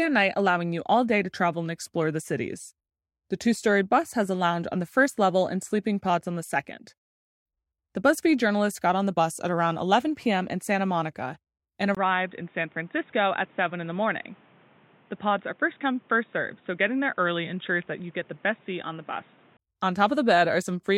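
At 11.95 s the speech cuts out for about 20 ms, then returns duller, boxier and a little quieter, with nothing above 3.8 kHz and faint new background noise, until 19.59 s. The likely cause is an input switched to a poorer device with a narrower band.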